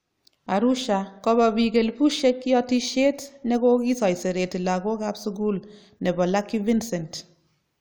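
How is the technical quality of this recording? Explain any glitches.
The technical quality of this recording is good, and there are no glitches to explain.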